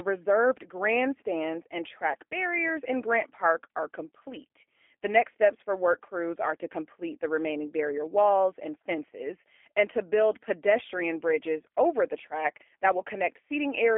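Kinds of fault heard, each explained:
G.729 codec: The speech has passed through a low-rate predictive voice codec that discards the waveform itself. It sends only a vocal tract filter, a pitch predictor and a sparse pulse excitation for each short frame, and resynthesises the signal at the far end. Nothing survives above 4 kHz, and the band runs from about 300 Hz to 3.5 kHz, so sibilants are dulled and the low end is thin. Throughout, the rebuilt speech sounds plainly rough and synthetic, which fits an 8 kbit/s G.729A stream.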